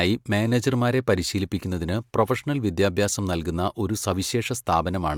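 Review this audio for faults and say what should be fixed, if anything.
Nothing here needs fixing, since no faults turn up anywhere in this speech clip.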